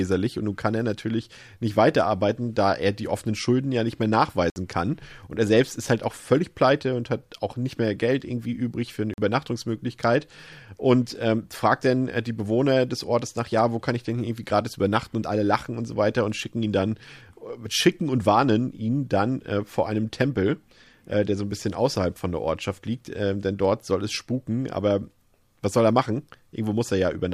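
A speech clip with two blocks of digital silence. After "ja nicht mehr", the audio cuts out from 4.5 to 4.56 s, a 60 ms hole. After "irgendwie übrig für eine", a 44 ms gap runs from 9.14 to 9.18 s. Each cut is abrupt. The output buffer was likely not filled in time.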